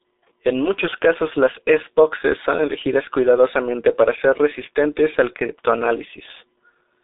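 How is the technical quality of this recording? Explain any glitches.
The technical quality is poor. Heavy G.723.1 codec damage runs through the entire recording. The speech is confined to a narrow telephone band of roughly 300 Hz to 3.7 kHz, with nothing at all above 3.8 kHz. The muffled, hoarse character fits a coder running near 6 kbit/s. It works in 30 ms frames and refreshes its model of the vocal tract only slowly, so fast consonants smear together and voiced sounds take on a rough, buzzy edge. On a spectrogram the energy stops at a hard ceiling just under 4 kHz and is thin below 300 Hz. The harmonics look blocky from frame to frame, and the waveform lacks crisp consonant onsets.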